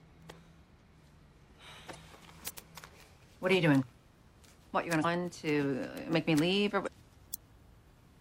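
At 1.93–1.95 s, 5.01–5.05 s and 6.83–6.88 s, damaged data in a compressed stream makes the decoder misread corrupted frames, lose sync and hunt for the next header. Unlike an ordinary dropout, each brief break is a decoding glitch.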